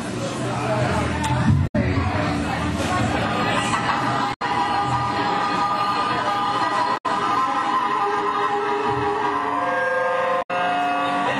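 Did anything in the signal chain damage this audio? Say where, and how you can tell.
Yes, in the codec: damaged data in a compressed stream causes 0.12 s blips at 1.63, 4.30, 6.94 and 10.39 s, where the decoder loses frame sync.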